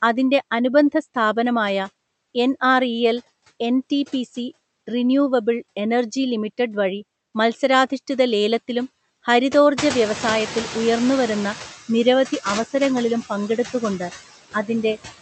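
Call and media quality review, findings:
Noise suppressor artifacts, whole clip: noise floor pumps, ducking about 15 dB between phrases and rising back under speech. Probable component: frame-wise spectral noise suppressor attenuating bands it classifies as stationary noise. Band-limited near 8 kHz, consistent with the call codec.

Noise suppressor catching up, 9.78–11.7 s: room noise jumps about 19 dB near 10 s and passes with only about 7 dB cut. Suppressor's noise estimate lags. Adapts over 1.92 s, then noise settles lower.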